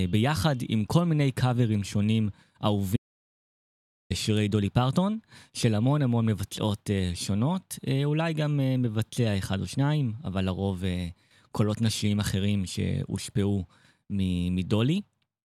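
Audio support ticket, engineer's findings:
Audio dropout to silence, 2.97–4.10 s: speech cuts to silence for about 1.14 s, no room tone. Likely input link loss or mute while the recorder kept writing.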